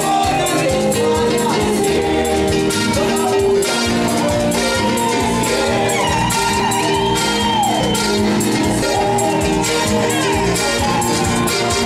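Whole compressed frames, a frame or two each time, were either missing from the file or refused by the decoder as damaged, so the audio jumps ahead by roughly 50 ms at 1.97 to 1.99 s, about 20 ms at 4.08 s and roughly 50 ms at 6.02 s. Later come abrupt jumps forward in the sound with no gap of silence, at 6.60 s (losing about 50 ms), 7.80 s and 8.82 s (roughly 150 ms each). These are likely dropped buffers from an overrun, where the program failed to collect samples before the hardware overwrote them, splicing the surrounding audio directly together.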